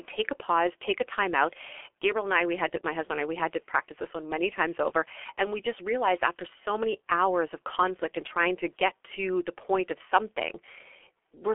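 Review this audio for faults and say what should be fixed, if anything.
Throughout the speech, G.723.1 codec damage is heavy: 30 ms frames and slow model updates smear consonants into a hoarse, muffled sound, consistent with roughly 6 kbit/s. The band runs about 300 Hz to 3.4 kHz, with nothing above 3.7 kHz. To prevent it, carry the call or recording over a wideband codec at a higher bitrate instead of G.723.1.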